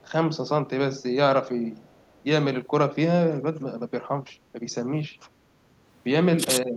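From 1.84 to 2.22 s there's a faint delayed copy of the speech, trailing by 466 ms and sitting very low, around 40 dB under the talker. That's likely an echo leak: a loudspeaker on the far end fed the mic, and the canceller let a scrap slip back.

At 5.31 to 5.48 s the room background dips by about 6 dB for roughly 150 ms, then comes back. That's background gated by the echo canceller, which clamped the mic down while the loudspeaker was playing and released it a moment later.

Right at the end, 6.55 to 6.7 s, the talker drops sharply, something like 25 dB, for about a tenth of a second. Likely speech suppressed in double talk: both sides overlapped and the canceller ducked everything, real voice included.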